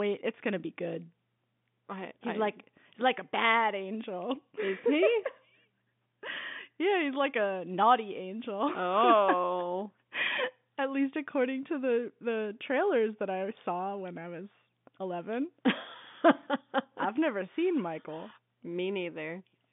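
No technical faults occur at any point in this speech, so there is nothing to place in time order.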